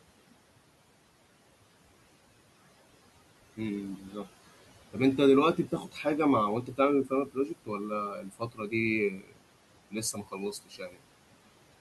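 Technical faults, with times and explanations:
Throughout, noise suppressor artifacts: the room noise, sitting about 18 dB under the speech, gets pulled down by about 17 dB whenever the suppressor decides a band is just steady background. Because it makes that call frame by frame, the leftover noise dips away in the gaps and swells back up under the talking.
3.97–4.26 s, 5.56–6.06 s, 6.65–6.79 s, 7.05–7.5 s, 8.15–8.73 s, 9.1–9.38 s and 10.13–11.02 s, speech cut by the noise suppressor: here it mistakes bits of the speech for noise and turns them down along with the background. The early ones are shallower, about 7 dB at 3.97 s and about 13 dB through the middle, but from 8.15 s they deepen to about 17–19 dB. Each hit only bites for a short stretch, from a tenth of a second up to half a second in the last one, so soft consonants and word endings sound swallowed or faint.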